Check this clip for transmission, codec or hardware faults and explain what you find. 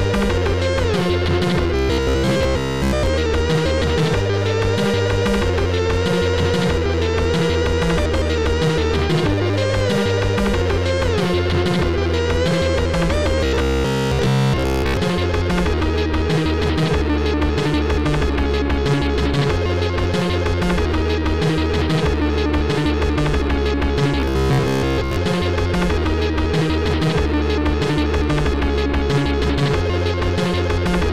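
There's one fault here, repeated three times: a robotic sound from repeated short buffers, at 1.76–3.06 s, 13.41–14.97 s and 24.20–25.16 s. Each stretch turns into a rigid metallic buzz at 66.7 Hz that only roughly follows the original, with most of the real audio skipped. That's likely new audio arriving too seldom, so the software keeps looping the last chunk, and the buzz rate fits a 15 ms repeat.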